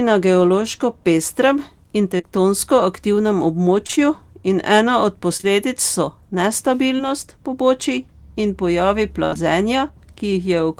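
Around 2.17 s and again at 2.21 s there's a back-to-back pair of short concealed packet losses. Each one drops about 20 ms of the speech, and the decoder patches the hole by extending whatever came just before, roughly 17 to 18 ms of synthesized fill each time. You hear it as a quick smear or tiny wobble rather than a clean dropout, and it goes by fast.

From 3.87 to 3.99 s it gets choppier, with repeated packet loss giving a robotic sound. Three gaps land inside about 120 ms, the longest around 21 ms, so half that stretch is patched-in audio instead of the real thing. Because the receiver keeps re-extending the last bit of sound before it can properly recover, that short span takes on a stuttery edge with slivers of speech missing.

The single short concealed losses come back at 5.37 and 5.41 s, another adjacent pair with about 21 to 22 ms of fill each, then once more at 6.97 s with about 15 ms of fill. 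They have the same character: a brief smudge where around 20 ms went missing.

Next comes the burst of packet loss at 9.25 to 9.34 s. About 60 ms is gone in one go, and the concealment stretches the preceding sound for roughly 70 ms while fading it down, so you get a held buzz or trailing hiss and then the audio picks up further along. Right on its tail at 9.34 s there's one more short concealed loss of about 13 ms of fill.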